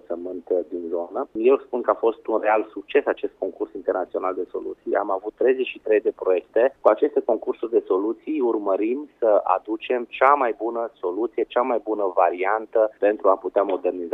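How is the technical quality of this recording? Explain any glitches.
No technical faults are audible anywhere in the recording.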